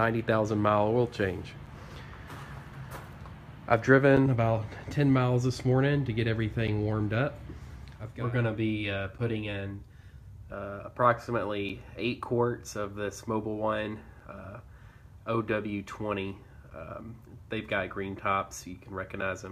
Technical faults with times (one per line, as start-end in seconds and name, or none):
1.66 gap between chunks
4.17 gap between chunks
6.67 gap between chunks
9.18 gap between chunks
11.69 gap between chunks
14.20 gap between chunks
16.70 gap between chunks
19.21 gap between chunks